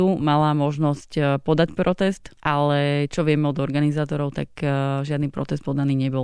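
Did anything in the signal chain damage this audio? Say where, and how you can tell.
No, nothing in the signal chain damaged this audio.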